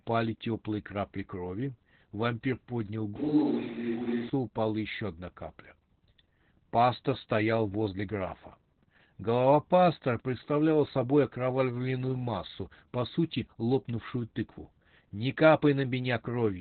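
Throughout the clip, Opus voice compression in its SILK mode squeezes the speech into a narrow band that stops near 4 kHz, consistent with a bitrate of around 8 kbps. The excitation is coded coarsely, so the speech sounds muffled, hoarse and faintly robotic throughout.

From 3.16 to 4.29 s, just before "упала еще одна капля", the pickup likely switches to a distant microphone. The speech turns roomy and hollow and loses bass, with no real change in level and a wash of room noise about 25 dB below the speech. The change happens abruptly at both ends.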